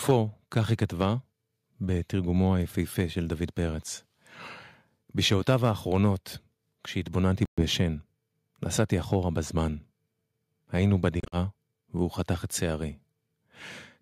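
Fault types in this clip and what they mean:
Microphone overload: The loudest syllables get a harsh, crackling edge near 0.1 s, 5.3 to 5.7 s and 8.8 to 9.2 s, fading from worst to faintest. The likely cause is input gain set too high, so peaks pushed about 1 to 3 dB past the converter's limit and had their tops sheared off.
Microphone volume stepped down: At 0.11 s, right inside that first distorted peak, the voice and background both drop abruptly by about 2 dB and stay lower. This is likely the call software reacting to the clipping by cutting the microphone's input volume in a single step.
Bluetooth dropout: The sound cuts to silence for about 120 ms at 7.45 s. Around 11.2 to 11.4 s it breaks up into shorter holes, the longest about 46 ms. Playback resumes as if it had kept running, likely because audio packets reached the headphones too late and were discarded.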